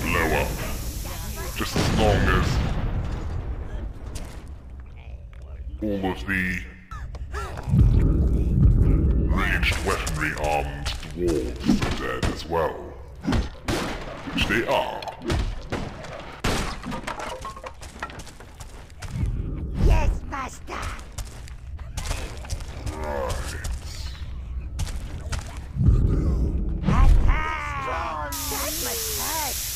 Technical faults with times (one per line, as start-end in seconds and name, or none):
none